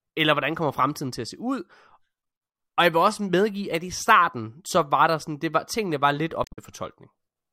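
Damaged data in a compressed stream appears from 6.44 to 6.58 s, right after "var tingene var lidt". Corrupted bytes make the decoder misread those frames, lose sync and hunt for the next valid header, producing a brief disruption in the speech.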